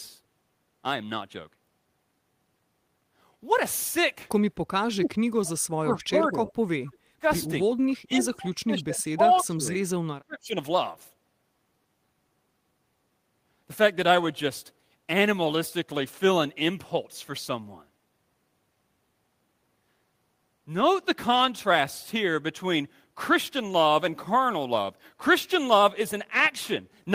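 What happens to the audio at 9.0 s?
Around 9.0 s the speech sinks sharply, by about 25 dB at its deepest, for roughly one and a half seconds between 8.06 and 9.81 s. This is speech suppressed in double talk, likely caused by both sides talking at once: the echo canceller couldn't separate this talker from loudspeaker echo and turned everything down.

Inside that dip, from 8.96 to 9.02 s, a faint scrap of voice arrives 253 ms late, roughly 25 dB below the speech. That is an echo leak, likely from a loudspeaker whose echo canceller let part of the microphone pickup return.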